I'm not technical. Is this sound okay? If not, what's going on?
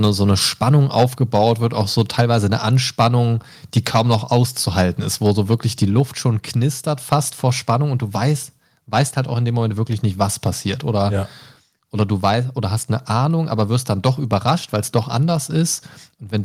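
No. The speech has two related problems.

The main one is microphone overload. From 0.04 to 2.46 s, briefly at 3.01 to 3.07 s, from 3.76 to 5.85 s, and again from 14.06 to 14.49 s, the loudest moments sound harsh and crackly. The microphone's input was likely set too high, so the tops of the loudest peaks hit the converter's limit and get flattened. Only a small share of the sound is cut off, but it's enough to give those syllables a rough, gritty edge.

The second is the microphone volume being stepped down. At 1.03 s, in the middle of that first distorted stretch, everything gets slightly quieter in one sudden step, both the speech and the background. This is likely the calling software noticing the overload and turning the microphone's input down on its own. The drop is small, and the later crackly stretches show it wasn't enough to stop the distortion.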